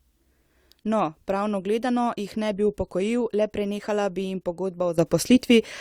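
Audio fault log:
4.98–5.81 s, sudden gain jump: just after "le prenehala bi jim" the level rises by about 10 dB in a single step and stays raised to the end, speech and background noise lifting together, likely from a digital gain change applied without any ramp.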